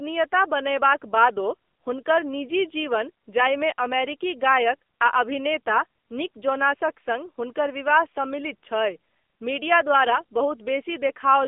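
Throughout, the speech sounds thin, buzzy and synthetic, with nothing above 3.6 kHz and little below 250 Hz: AMR narrowband mobile codec damage, consistent with a low, roughly 8 kbps mode.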